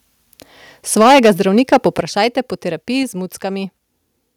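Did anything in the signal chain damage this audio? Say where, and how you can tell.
Yes. Microphone overload at the converter: harsh crackle on peaks from 0.99 to 1.31 s (about 9 dB over, roughly a fifth of samples flattened) and from 1.57 to 1.87 s (about 5 dB over), likely from input gain set too hot.

Microphone volume stepped down in call processing: sudden level drops of about 2 dB at 1.02 s, 6 dB at 2.01 s and 2 dB at 3.03 s, likely the software reacting to the clipping.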